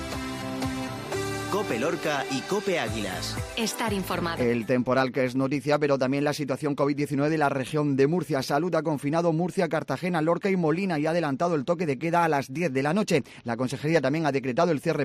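No technical faults can be heard anywhere in this recording.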